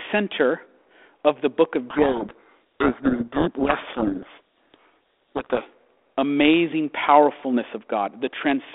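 A codec payload misread runs from 1.9 to 5.67 s. The two ends order the bits of each G.726 code word differently, so the decoder rebuilds wrong differences and the speech sinks under harsh, grinding distortion. It clears once both sides agree again. The 32 kbit/s G.726 line stays band-limited to roughly 250 Hz to 3.6 kHz throughout.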